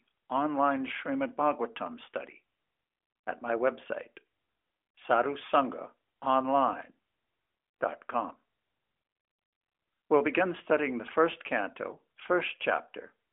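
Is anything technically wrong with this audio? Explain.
No, nothing here is faulty: the speech has the narrowband sound of a mobile call, with nothing above about 3.7 kHz and only the light coding texture that fits AMR-NB at its 12.2 kbps top rate.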